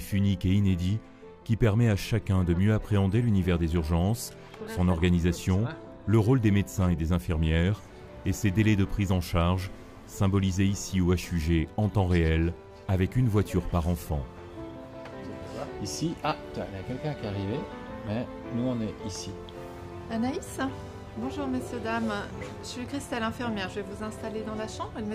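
No technical faults can be heard anywhere in the recording. Nothing in the sound at any moment points to a problem in how it was captured or carried.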